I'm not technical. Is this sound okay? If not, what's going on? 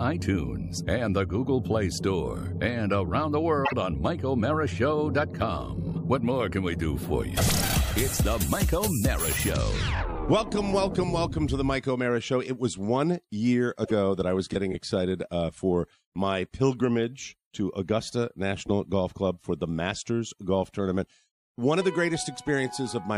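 No. At 3.65 to 3.73 s and 13.83 to 13.92 s, the sound skips ahead with a brief chirp or glitch. The likely cause is a broken MP3 bit reservoir after missing pieces.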